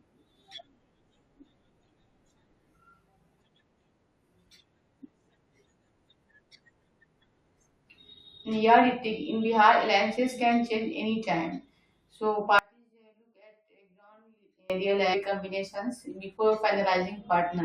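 At 12.59 s the speech drops out abruptly and doesn't return until 14.70 s, so roughly 2.1 seconds go missing. It's an audio dropout to a faint residue: the gap isn't silent, just a faint trace of the sound sitting something like 35 dB below normal level. That points to the signal likely being lost upstream while the path after the break stayed live, so you hear the cut and the sudden return, not a pause or fade.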